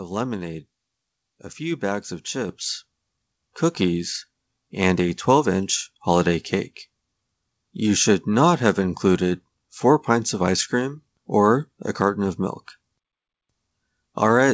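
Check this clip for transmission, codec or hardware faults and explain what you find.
One fault stands out: the microphone volume stepped up at 2.49 s. The call software judged the input too quiet and raised the device's gain at once, so the level jumps by about 7 dB. Voice and background noise rise together and stay there. A talker leaning closer would lift only the voice, and automatic gain riding would change the level smoothly rather than in one jump. The audio carries nothing above 8 kHz, which fits a wideband call codec such as G.722.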